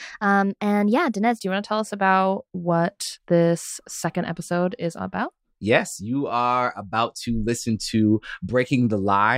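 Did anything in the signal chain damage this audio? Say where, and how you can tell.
Yes, there's a wrong sample rate fault at playback. From 0 to 1.38 s, just before "do you want to," the speech runs 1.09 times fast and sits about 1.5 semitones sharp. That fits 44.1 kHz material played at 48 kHz without resampling.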